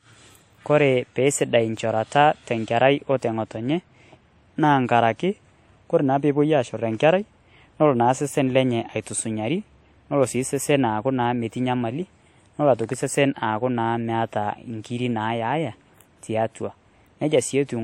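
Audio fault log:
throughout transcoding between lossy codecs: likely re-encoding, fitting roughly 64 kbit/s WMA then 56 kbit/s MP3; two codecs' artefacts stack audibly, nothing above 16.4 kHz.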